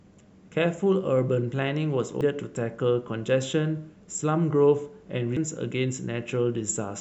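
A speech recording with two brief bursts of damaged data in a compressed stream, at 2.21 s and 5.37 s. Each is a short chirp, squawk, click or short hole: the decoder hits corrupted bytes, misreads the affected frame, loses sync and has to hunt for the next valid frame header.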